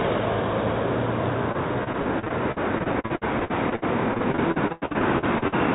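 From 1.52 s to 5.54 s, repeated packet loss (robotic sound) chops the audio. Dozens of short holes, the longest 92 ms, are bridged by extending the preceding sound across about a quarter of the span, giving a choppy result. A spectrogram shows smeared, repeated frames and abrupt breaks, all beneath a hard 4 kHz ceiling that points to a narrowband call codec.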